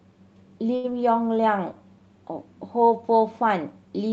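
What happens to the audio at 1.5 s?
At 1.5 s the speech is inside a jitter buffer slow-down that runs from 1.23 to 1.79 s. The receiver's buffer was short of reserve, so it stretched the signal by repeating single pitch periods and slivers of pause, adding about 38 ms over that stretch. Playback drops to roughly 94% speed while the pitch stays put, so sounds are drawn out slightly.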